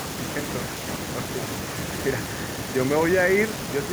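Nothing here to flag, as there are no technical faults anywhere in this bit of speech.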